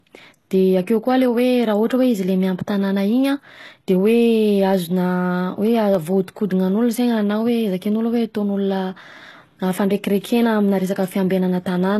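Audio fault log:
throughout: HE-AAC compression, likely. Plainly audible codec damage, with nothing above 12.3 kHz. The treble above the coded band is rebuilt by copying lower bands upward, so sibilants sound gritty and metallic, which fits a very low bitrate around 16 kbps.
5.13 to 6.22 s: CD scratch ticks. Five short ticks, the longest about a millisecond, at roughly four to five per second. That regular spacing fits a blemish passing the laser once per disc revolution, where the player interpolates or mutes samples it cannot correct.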